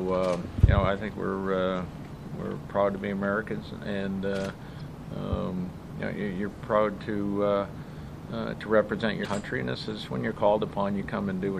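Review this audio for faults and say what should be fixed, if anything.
Watery, swirly treble with smeared attacks runs throughout, likely MP3 compression at a low bitrate such as 64 kbps, cutting the top end and dropping weak detail.

Brief chirps or blips at 4.77 to 4.81 s and 9.21 to 9.26 s come from damaged data in a compressed stream, where the decoder misreads frames and resynchronises.

To prevent both, encode from the original at a higher bitrate or losslessly, and transfer or store the file with checksums so corrupted bytes are caught.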